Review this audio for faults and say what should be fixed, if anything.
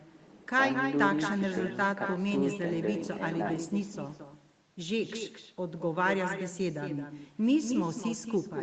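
Echo with no canceller runs through the whole speech clip: every phrase is followed around a fifth of a second later by a second copy sitting about 7 dB below the direct sound, and thinner. That delay matches a round trip through the network: the far end played the call on a loudspeaker, its microphone picked the playback up again, and nothing subtracted it before it was sent back. The band stopping at 8 kHz comes from the call path's codec and is expected. To prevent this, enable acoustic echo cancellation on the far-end device, or have that side use a headset.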